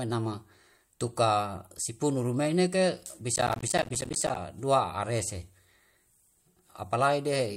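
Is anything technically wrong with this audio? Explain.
Yes. From 3.36 to 4.36 s, right after "sipunu rumei neke", there's processor overload crackle. The machine kept missing its deadlines on buffers of around 10 ms, dozens over that stretch, and each miss dropped in a short hard-edged gap of silence, so the speech gets a gritty, tearing crackle until it clears.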